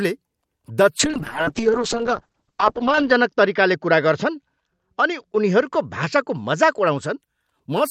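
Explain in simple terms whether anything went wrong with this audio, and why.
Something did go wrong: from about 1.01 s to 7.25 s there's a call bitrate drop. The call got far less data to work with, so the speech turns rough and muffled, losing its crisp top end, and stays worst for about two seconds.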